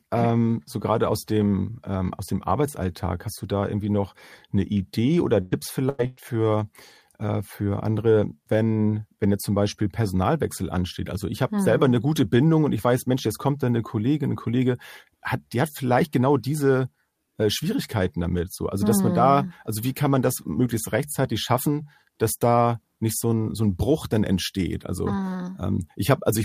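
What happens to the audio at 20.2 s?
Nothing goes wrong at 20.2 s; the speech continues intact through that moment with no dropout, click, distortion or other fault.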